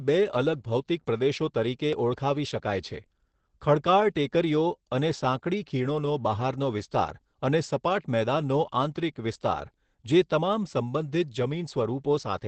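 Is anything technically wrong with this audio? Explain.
Yes, the whole clip carries Opus voice compression. Nothing comes through above about 8.6 kHz, and the speech sounds muffled, a bit hoarse and robotic, which points to Opus's SILK predictive coder in wideband at a low bitrate, around 12 kbps, coarsely coding the excitation.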